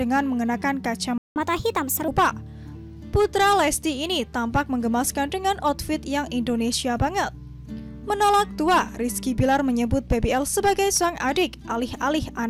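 A playback stall opens the trouble at 1.18 s: the sound cuts out in mid-flow and the output stays silent for about 180 ms, until 1.36 s. A gap this clean, with nothing audible filling it, points to the player likely running dry of data or having its output thread held up, so it had nothing to send to the speakers. When the sound returns, it picks up from the point where it broke off.

Catch-up at higher speed follows directly, from 1.36 s to 2.08 s. To recover the time lost in the stall, the player resamples its backlog and runs it at 1.25 times normal speed. Because resampling changes rate and pitch together, the audio both hurries and rises by about four semitones, taking on a chipmunk-like tint for roughly three-quarters of a second. At 2.08 s speed and pitch drop back to normal.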